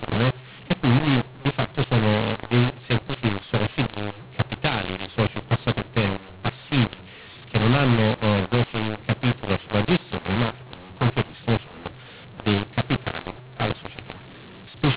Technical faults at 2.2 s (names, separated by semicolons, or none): mu-law and A-law mixed up